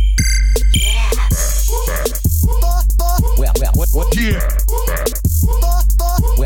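A short piece of music with no technical fault to report. Nothing in it is heard to go wrong at any point.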